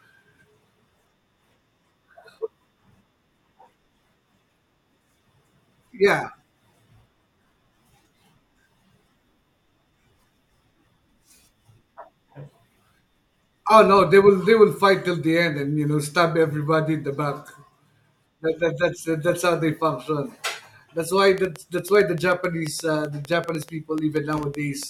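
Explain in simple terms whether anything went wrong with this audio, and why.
A train of clicks runs from 21.18 to 24.84 seconds: around thirty sharp ticks, roughly 7.7 per second at an uneven pace, sitting on top of the speech. Something likely kept injecting short electrical pulses, such as nearby equipment or a faulty connection or power supply.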